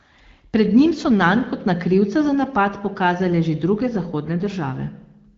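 Nothing's technically wrong with this short bit of speech, which sounds like it's carried over the AMR wideband (HD Voice) codec, with the top end stopping at about 7.3 kHz just as that path would have it.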